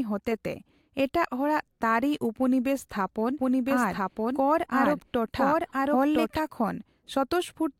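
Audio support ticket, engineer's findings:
Doubled audio track, 3.39 to 6.39 s. Full-band copy of the speech trails by roughly one second at about equal level, dry, with no decay or room colour. It cuts in and out abruptly at both ends. Likely cause: a second, slower capture path mixed in, or an edit holding two out-of-step copies.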